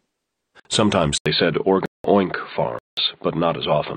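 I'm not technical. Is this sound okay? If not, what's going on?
No, there are two kinds of problem in this speech recording.

The first is a block of digital silence, and it happens three times. At 0.60 s the sound drops out for about 53 milliseconds, heard as a quick tick or tiny gap. At 1.86 to 2.04 s and again at 2.79 to 2.97 s it vanishes for about 0.19 s each time, which is long enough to hear as a clear hole. The program recording the sound likely didn't deliver its next chunk of audio in time, so silence was put in its place. The two longer gaps are the same size, which suggests a chunk of the same fixed size went missing each time.

The second is an input switched to a poorer device. At 1.18 s there's a brief silence of about 80 milliseconds. After it the voice turns duller and more muffled until the end, because nothing above about 4.6 kHz comes through any more. The loudness stays about the same, but a faint new background noise comes in. 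The likely cause is that the system swapped to a different, lower-quality microphone or headset partway through recording.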